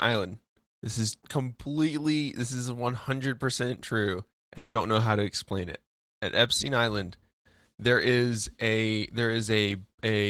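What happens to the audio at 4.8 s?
Long network dropout, 4.57 to 4.78 s: audio likely stopped arriving, so a fading buzz fills 180 ms before brief silence, and speech resumes with that stretch lost.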